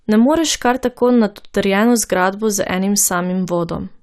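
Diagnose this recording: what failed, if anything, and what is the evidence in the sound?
The codec stage failed, with MP2 compression plainly audible across the whole speech clip. The sound is dull, with a gurgling, granular edge. That points to a low bitrate, which fits about 80 kbps. Upper sub-bands switch off and flicker, and the remaining bands are coarsely quantised.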